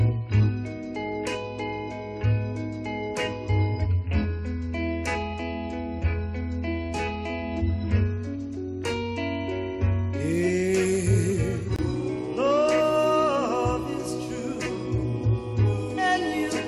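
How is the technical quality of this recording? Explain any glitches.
One glitch stands out: a brief dropout to silence near the 12-second mark.

A gap between stream segments occurs from 11.76 to 11.79 s. Two consecutive chunks of the stream were timestamped so that the second begins slightly after the first ends, and the player filled the 25 ms hole with silence. It sounds like a sudden, hard-edged blank in the sound. Nothing is missing; everything after the gap is simply pushed about 25 ms later.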